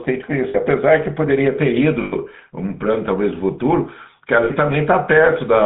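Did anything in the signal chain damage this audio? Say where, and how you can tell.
Yes. GSM full-rate codec damage runs throughout at the codec stage: the speech has a buzzy, gravelly roughness and sits in a band of roughly 150 Hz to 3.7 kHz, consistent with 13 kbps full-rate coding, which models the vocal tract and drives it with coarse, regularly spaced pulse excitation.

Lost GSM frames at 0.48 s, 2.02 s and 4.44 s occur on the network side, lasting about 60 ms, 100 ms and 60 ms. The decoder repeats the last good frame, so the speech smears into a short, rough metallic ring instead of continuing normally.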